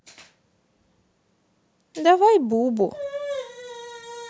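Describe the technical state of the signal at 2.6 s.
At 2.6 s the signal is partway through an automatic gain rising event that runs from 1.94 to 3.03 s. The gain control, judging the input too quiet, raises its gain gradually by about 6 dB over roughly a second, so the speech and background noise swell together.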